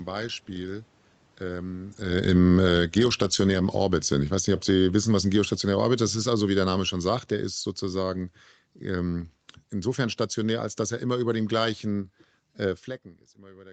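From 2.02 to 3.76 s the speech starts loud and then sinks by about 10 dB, background and all, and from 4.46 to 8.29 s it sags again by about 9 dB. This is automatic gain falling: the gain control judged the input too loud or its background noise too strong and pulled its gain down gradually.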